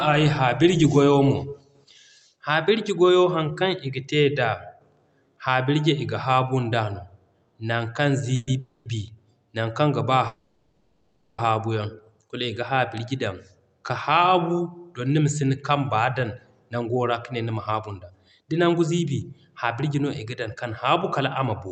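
Around 8.35 to 8.49 s, again right after "nan kaŋ" from 8.59 to 8.87 s, and then from 10.27 to 11.40 s, the speech hits a call audio freeze. The last sound gets stretched into a fading buzz for roughly 0.12, 0.26 and 1.1 s, likely because packets stalled in transit and the jitter buffer ran dry. Nothing gets lost: the speech picks up where it left off, just later.

Later, jitter buffer speed-up kicks in after "dan ka haabu don" from 15.10 to 16.20 s (6% faster), from 16.75 to 20.50 s just before "kan haabu" (7%), and from 21.04 s to the end (4%). The receiver is trimming pitch-period slivers to shed extra delay, around a third of a second in the longest stretch, so the speech sounds hurried in the first two stretches with no change in pitch, all over the Opus call path's roughly 8 kHz top end.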